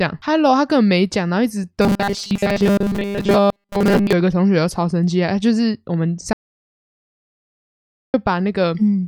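Robotic sound from repeated short buffers runs from 1.82 to 4.13 s. The speech becomes a rigid metallic buzz at 200 Hz that still loosely tracks the syllables. This likely comes from audio arriving too seldom, with a 5 ms slice replayed in place of most of the real signal.

An audio dropout to silence follows from 6.33 to 8.14 s, a gap of about 1.81 s. The speech cuts out to silence with no room tone, then resumes. This is likely a lost input, with silence written while the signal was missing.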